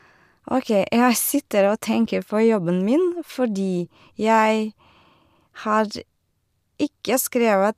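No technical faults can be heard anywhere in this speech.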